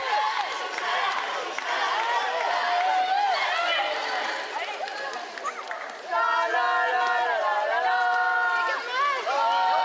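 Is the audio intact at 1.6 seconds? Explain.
Yes, the audio at 1.6 seconds is intact, with no dropout, glitch or other fault at that moment.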